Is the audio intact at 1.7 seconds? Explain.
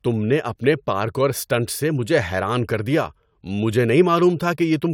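Yes, the speech at 1.7 seconds is intact, with no audible fault at that moment.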